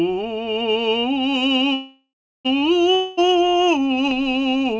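A call audio freeze runs from 1.74 to 2.47 s. The music stops moving forward and the last sound is carried on as a fading buzz, which thins out to silence for about the final third of a second. The likely cause is packets held up in transit, leaving the jitter buffer empty. When they arrive, the music resumes exactly where it halted, so nothing is lost, but everything after is about 0.71 s late.

A long network dropout follows from 2.95 to 3.20 s. The last sound is again stretched into a decaying buzz for about a quarter of a second. This time the music comes back further along, with roughly 0.22 s skipped. That points to audio that likely never arrived, rather than audio that was merely delayed. Through both faults, the G.722 call path leaves nothing above 8 kHz.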